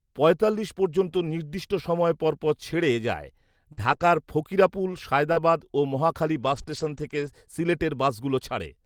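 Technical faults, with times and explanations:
1.07 to 1.09 s, lost packet rebuilt from error correction: a brief rough, noisier patch just before "নির্দিষ্ট সময় পরপর ছেড়ে", with no gap. One 20 ms packet went missing, and the decoder played the low-bitrate copy that the following packet carried.
1.11 to 1.15 s, short concealed packet loss: a quick smear or wobble in the same lead-in to "নির্দিষ্ট সময় পরপর ছেড়ে". About 20 ms never arrived in time. The receiver extended the preceding sound to cover roughly 12 ms of it, then blended back into real audio.
1.15 to 1.33 s, lost packet rebuilt from error correction: a longer grainy, noisier stretch running up to "নির্দিষ্ট সময় পরপর ছেড়ে". About 100 ms of it was rebuilt, five separate packets replaced by their coarse redundant copies. The audio stays continuous but sounds roughened.
3.7 to 7.3 s, scattered short gaps: about four brief ticks or hiccups spread across this span, the longest roughly 40 ms. 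About 120 ms was missing in total, and roughly a tenth of a second was patched by continuing the last sound. A larger share, about 580 ms, was rebuilt from error-correction copies, which adds roughness.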